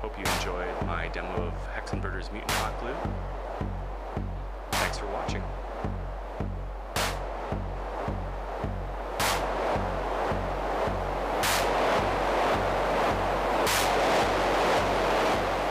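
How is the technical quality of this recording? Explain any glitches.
Nothing stood out on listening; the recording gave no technical glitches to explain.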